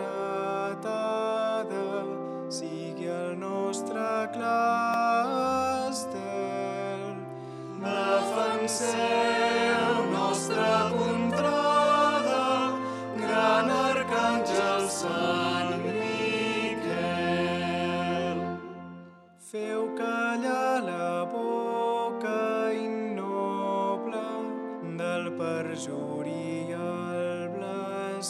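At 4.94 s a block of digital silence cuts in for about 0.73 ms, which fits a 32-sample block left unfilled. The sound drops out and returns with no fade, so both edges merge into one sharp tick, too brief to be heard as a gap or dropout.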